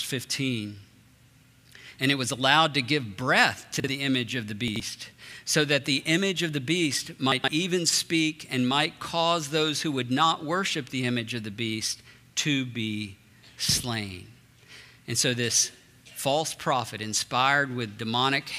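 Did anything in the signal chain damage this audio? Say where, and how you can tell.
Yes. Chunks out of order at 3.80 to 3.88 s, 4.68 to 4.80 s and 7.32 to 7.48 s, damage from the buffer or network stage. Each spot sounds briefly jumbled and has hard joins, though nothing goes missing. A block of audio arrived late and was played after its successors, one, two and then three blocks late, which fits 40 ms chunks. That is why the scrambled stretches grow longer each time.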